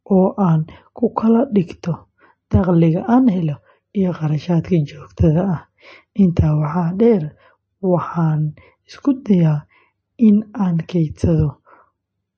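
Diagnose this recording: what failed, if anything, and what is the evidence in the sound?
Codec stage. The speech has nothing above 8.3 kHz and sounds watery throughout. This is likely MP3 compression starved of bits, which fits roughly 32 kbps.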